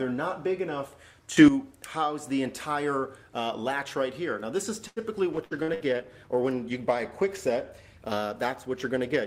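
At 1.37 s the level jumps by about 12 dB for roughly 0.1 s. Sound and background noise rise together. This is a sudden gain jump, likely a setting applied without a ramp.

At 4.87 s there is a short stall from a late packet. The jitter buffer ran dry, so the last sound is held for 90 ms. Playback then resumes from the same point with nothing lost.

From 5.38 s a call bitrate drop sets in. The encoder falls from 128 to 19 kbps and sits at that floor for about 2.6 s. Coding turns coarse and the high frequencies are cut. The sound stays degraded to the end.

Inside that stretch come three bursts of packet loss, at 5.44, 5.63 and 5.74 s. Each fills its gap by continuing the last sound and fading it, for 63, 54 and 61 ms. About 60 ms of audio is missing after each one.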